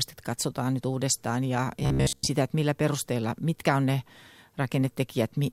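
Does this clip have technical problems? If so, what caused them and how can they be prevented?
Yes. Robotic sound from repeated short buffers occurs from 1.80 to 2.28 s, between "katsotaan nyt uudestaan ja" and "että millä perusteella mitkä". For most of that stretch the speech turns into a rigid, metallic buzz at 66.7 Hz, which fits a 15 ms chunk being replayed over and over. The likely cause is new audio arriving too slowly. A larger buffer or a steadier audio feed would prevent it.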